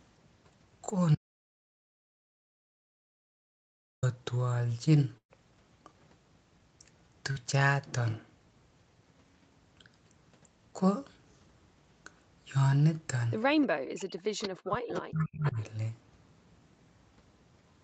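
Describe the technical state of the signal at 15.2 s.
At 15.2 s the speech sits inside a stretch of speech suppressed in double talk running from 14.66 to 15.58 s. The level dips, dropping at its deepest by roughly 40 dB, with around 0.7 s of the span pulled down in total. This is likely an echo canceller that, with both ends talking at once, could not tell the near talker from loudspeaker echo and attenuated everything it was unsure of.

Overlapping that moment, from 15.18 to 15.24 s, is a brief echo leak: a faint delayed copy of earlier speech, about 0.32 s behind the original and roughly 20 dB below it, heard as a short scrap. The likely cause is the loudspeaker side's echo canceller failing to remove all of the loudspeaker sound reaching its microphone, so a residue was sent back into the call.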